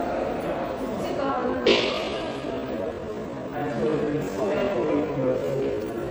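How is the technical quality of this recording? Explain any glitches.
The technical quality is poor, with audible codec damage across the whole recording and an abrupt slowdown partway through.

MP3 compression runs throughout. Watery, swirling textures and dulled treble fit a low bitrate of around 64 kbps, likely from starving weak frequency lines. Unlike plain low-pass filtering, the damage flickers from moment to moment.

A time-stretched section runs from 1.22 s to the end. The sound slows to about 0.59× speed with its pitch unchanged, likely from repeated short pieces. Tape-style slowdown would lower the pitch instead.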